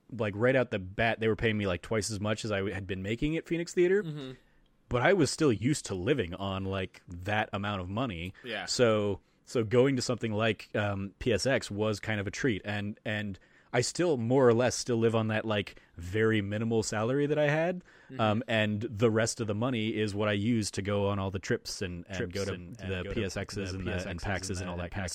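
Doubled audio track from 22.12 s, after "all the trips and", to the end: a dry copy about 5 dB quieter trails roughly 0.7 s behind, likely captured twice.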